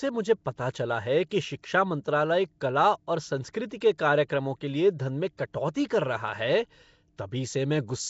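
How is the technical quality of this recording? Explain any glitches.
Technical quality is limited: a coding artefact colours the whole recording, and two sharp attacks are smeared.

Throughout, the speech has a rough, hissy halo and a watery, underwater smear, with nothing above 7.7 kHz. The likely cause is Nellymoser compression, the old Flash microphone codec. It spends a fixed two bits per sample in short blocks and leaves weak bands without bits, filling them with noise. The sound fits a rate near 32 kbps.

Pre-echo occurs at 4.28 s, just before "के लिए धन में", and at 5.74 s, just after those same words. A brief hiss of 15 ms and 11 ms respectively leads into each attack, softening it. The codec spreads its quantisation noise across the whole block, so noise sized for the loud onset leaks into the quiet moment before it.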